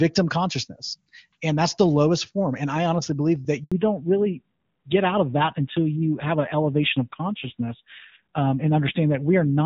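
Right after "I honestly believe that", at 3.64 s, the speech drops out abruptly and stays silent for 80 ms until 3.72 s. This is a handover gap: the call was moved to another network, and no speech frames arrived while the link switched over.

From 3.72 s to the end, the voice sounds duller and rougher, with nothing above 4 kHz. This is a fallback to narrowband. Before the gap, the HD Voice AMR wideband codec was carrying clear wideband speech. After the handover, the call dropped to narrowband AMR, and the rasp fits one of its lower bitrate modes.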